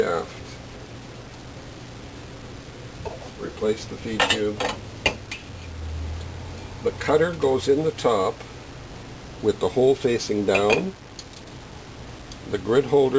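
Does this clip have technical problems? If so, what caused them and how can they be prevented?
No, there's nothing wrong here: no dropouts, glitches or other technical trouble turn up anywhere in the recording, so there's nothing to prevent.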